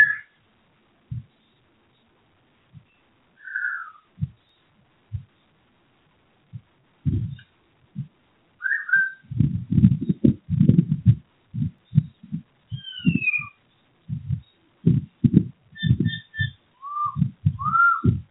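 Noise suppressor applied to sounds, throughout: a speech-oriented suppressor treats steady and fading parts of the sound as noise, so the level swings by about 5 dB and held parts pump and thin. The call path's band limit leaves nothing above 4 kHz.

Sound cut by the noise suppressor, at 0.26–1.09 s, 1.59–2.89 s, 4.70–5.12 s, 6.06–7.00 s, 7.57–8.61 s, 11.23–11.54 s and 15.55–15.75 s: sustained portions and decays sink by up to about 20 dB, and tails are cut short while onsets survive.

At 4.49 s and 11.78 s, a small forward jump. It is likely a dropped buffer (overrun), where roughly 20 ms and 10 ms of audio were overwritten before being read and the remaining sides were spliced together without any silence.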